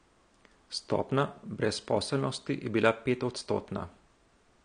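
Speech, and the whole thing carries plainly audible AAC compression damage, likely from AAC-LC at a low bitrate around 32 kbps. Nothing comes through above about 9.8 kHz, so it sounds dull, and sibilants and held sounds pick up that smeared, fizzy, warbly texture.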